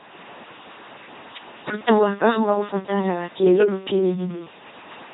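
A speech clip that buzzes mechanically and robotically throughout, with nothing above 3.8 kHz: heavy LPC-10 vocoder damage, consistent with its 2.4 kbit/s pulse-or-noise excitation. From 1.98 to 4.73 s it turns rough and slightly doubled, from channel delay (comb filtering): one channel lags the other by about 20 ms before the two are summed to mono, cutting notches with the first around 20 Hz.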